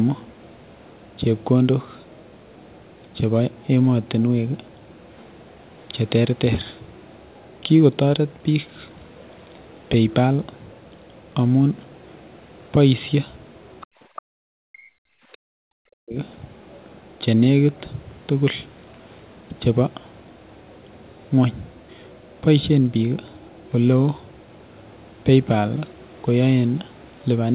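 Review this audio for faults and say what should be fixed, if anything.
The echo canceller did not fully remove the loudspeaker signal from the microphone, which is the likely cause of brief scraps of the other side's voice leaking through at 13.81–13.86 s and 14.16–14.22 s. These faint fragments sit roughly 20 to 25 dB below the talker.

Between 13.86 and 14.44 s, the echo canceller clamped the microphone while the loudspeaker was active, so the background is gated by the echo canceller. The room sound falls away by about 40 dB for roughly half a second, then returns.

When both sides spoke at once, the canceller likely mistook the talker for echo and suppressed both, producing speech suppressed in double talk at 14.72–15.07 s and 15.34–16.17 s. The talker's voice sinks by up to around 40 dB across those spans. The narrowband 4 kHz ceiling throughout fits a G.711 mu-law call.

To prevent these faults, improve the echo canceller's echo-path modelling and double-talk detection so it removes residual echo without ducking the near-end talker or the room.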